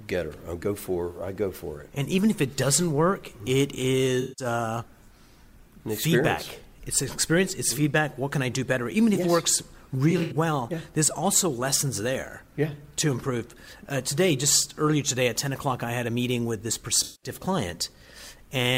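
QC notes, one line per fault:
4.21–4.45 s, AAC frame loss with concealment: about 170 ms of coded audio went missing and the decoder rebuilt it from the last good spectrum, so the gap turns into a smeared, noisy patch.
10.10–10.34 s, AAC frame loss with concealment: 128 ms lost in scattered bursts over 213 ms, the longest around a tenth of a second. Repeated patching from stale spectra gives a phasey, flickering texture.
17.03–17.30 s, AAC frame loss with concealment: 192 ms missing, filled from the preceding spectrum, leaving a noisy, smeared stretch.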